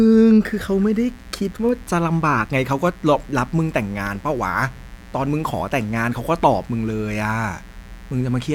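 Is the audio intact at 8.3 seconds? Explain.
No. Mains buzz runs from 0.45 s to the end: switching spikes at twice the 60 Hz mains rate leak in, adding a steady, raspy buzz roughly 25 dB below the speech.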